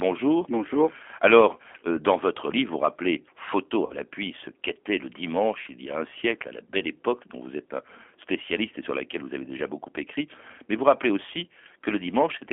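Throughout, the speech carries the rough, slightly synthetic grain of the G.729 codec, confined to a telephone band of about 250 Hz to 3.4 kHz. That fits an 8 kbit/s coder rebuilding each frame from a filter and a few pulses, unlike simple band-limiting, which dulls the sound without adding texture.

VoIP packet loss concealed by the speech codec follows after "livre vous rappelez photo", from 3.86 to 3.98 s. About 40 ms of audio, consistent with two lost packets, is replaced by an extrapolated buzzy tone or coloured noise that fades, and the voice stays weak for a while before "ce qu'était le" resumes. A second, shorter gap at 5.62 s, about 20 ms after "ce qu'était le" and before "il y a un", does the same. Unlike a dropout, neither gap goes silent. Both smear the previous sound forward.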